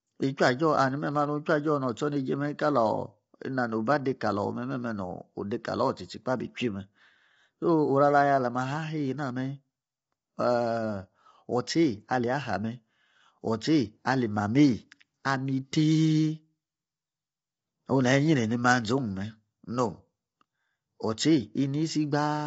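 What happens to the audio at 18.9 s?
At 18.9 s the speech carries the same damage heard across the whole recording, likely low-delay AAC compression. Short codec frames resolve the pitch harmonics coarsely, leaving rough, grainy speech with noise between harmonics, nothing above 7.8 kHz, and plainly audible artefacts consistent with roughly 24 kbps.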